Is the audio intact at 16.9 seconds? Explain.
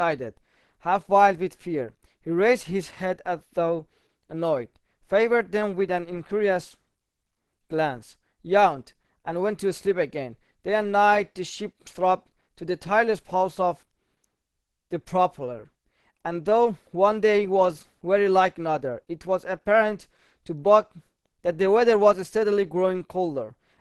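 No. At 16.9 seconds, as throughout, there's nothing above 12.1 kHz and a smeared, low-bitrate texture, likely low-bitrate audio saved at a high bitrate, with the original losses kept.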